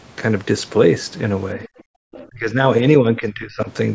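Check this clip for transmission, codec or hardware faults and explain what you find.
Three kinds of echo-canceller fault show up in this speech.

Other side's voice leaking through at 1.63 to 1.8 s and again at 2.13 to 2.27 s. A faint second voice sits well under the talker. It is likely loudspeaker echo the canceller missed.

Background gated by the echo canceller from 1.89 to 2.01 s. The canceller clamped the microphone. Room sound drops by about 40 dB for roughly a tenth of a second, then returns.

Speech suppressed in double talk from 2.29 to 2.62 s and from 3.01 to 3.69 s. Both sides talking at once likely confused the canceller. The talker's level dips hard in the first stretch and more mildly in the second.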